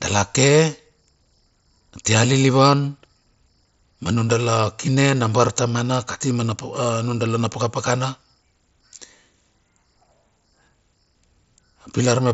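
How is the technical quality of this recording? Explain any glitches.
Nothing stood out on listening to this speech recording, which comes through the band-limited sound of a wideband Bluetooth headset link.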